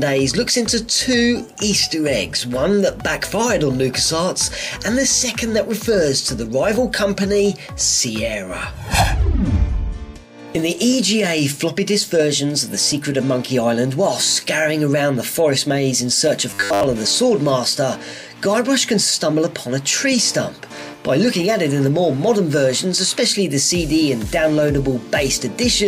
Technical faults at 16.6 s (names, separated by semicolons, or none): robotic sound from repeated short buffers